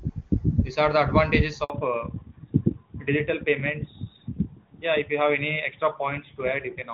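Handover gap, 1.64 to 1.70 s: the call is passed from one network to another, and for about 60 ms no speech frames reach the receiver. The sound fades out within a few tens of milliseconds and stays silent until the new link delivers audio again, so whatever was spoken in that interval is simply missing, heard as a brief dropout.

Fallback to narrowband, from 1.70 s to the end: after the switch, the call continues on an older narrowband codec instead of HD Voice. Before the handover, the wideband path sounds clean, with little or no audible coding damage, consistent with a high HD Voice rate. From 1.70 s onward, nothing above 4 kHz survives. Sibilants and breathy detail lose their air, and the speech turns muffled, duller and somewhat rougher, with a boxed-in telephone character.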